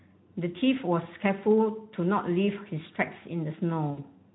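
Speech, carried over a Speex connection at 15 kbps with light codec damage. VoIP packet loss concealed by the speech codec occurs twice, at 1.03–1.07 s and 3.92–4.00 s. About 20 ms and 60 ms of audio are missing. The decoder stretches the last sound into a fading buzzy tone or coloured noise, and the voice stays weak or distorted briefly after each gap.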